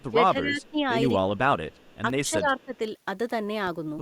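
From the start to 0.91 s the speech sinks by about 20 dB, then again from 1.25 to 1.57 s (about 25 dB) and from 2.3 to 2.74 s (about 10 dB). That's speech suppressed in double talk, likely the echo canceller ducking this side while the far end talks over it. Woven in are faint echo leaks at 0.62 to 0.7 s, 1.71 to 1.97 s and 2.6 to 2.77 s: a copy of the voice trailing by 216 ms, about 35 dB down, likely loudspeaker pickup the canceller didn't fully remove.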